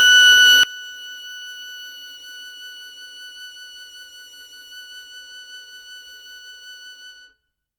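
A music clip in which, from 0.63 s to the end, the summed sound falls by about 24 dB and turns faint, with the centred, common material almost gone. The likely cause is one channel inverted: one side's polarity is flipped, so identical content cancels in mono. Unlike a dead channel, which only halves the level, this leaves only a faint residue of the small mismatch between the channels.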